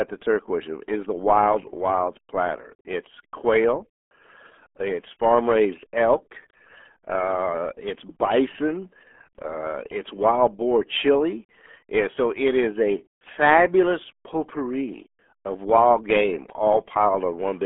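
From start to finish the speech carries the sound of the RealAudio 14.4 codec, the early dial-up speech coder. It squeezes the signal hard, in a way that fits an 8 kbit/s stream, so the voice comes out muffled and gargly, with a wobbly, underwater texture. On a spectrogram the energy is boxed into roughly 250 Hz to 3.4 kHz, with a clean wall and nothing at all above 3.7 kHz. The harmonics look smeared and blocky rather than finely striated.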